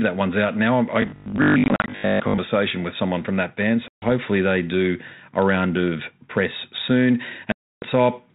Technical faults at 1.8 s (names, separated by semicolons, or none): robotic sound from repeated short buffers; packet loss on an ADPCM call